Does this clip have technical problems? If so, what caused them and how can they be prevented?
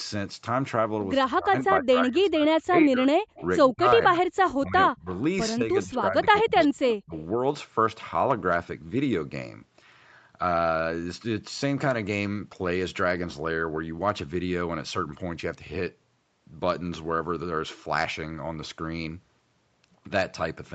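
Yes, two kinds of trouble, both packed into the first seven seconds or so.

Speech suppressed in double talk shows up at 1.23–3.06, 3.71–4.24, 4.61–5.08, 5.56–6.72 and 6.96–7.13 s. The speech sinks, sometimes chopped into pieces, by roughly 20 dB at the mild end and as much as 40 dB at the worst, around 3.71 and 4.61 s. The likely cause is an echo canceller that couldn't separate the local talker from loudspeaker echo while the far side was also talking, so it ducked everything. To prevent it, use a headset or tune the canceller and suppressor for proper double-talk handling so it doesn't clamp down so hard.

Echo leak appears as short scraps at 3.35–3.47, 5.10–5.22 and 6.88–6.92 s. Each is a faint copy of the speech delayed by 123 ms, sitting about 20 to 30 dB below the main signal. It's likely a speakerphone on one side whose canceller didn't fully remove what its microphone picked up, so some of it was sent back. 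To prevent it, have that side use a headset or lower its speaker volume, and make sure its echo canceller has converged.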